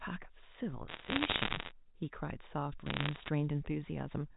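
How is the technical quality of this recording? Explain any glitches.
Two bursts of crackle mar the speech, from 0.88 to 1.72 s and again from 2.86 to 3.29 s. Both come from bit errors on a digital phone line. The crackle is a spray of sharp ticks laid over the speech, denser in the first burst. Flipped bits in the narrowband G.711 stream each corrupt a single sample, at roughly one to two percent and then under one percent.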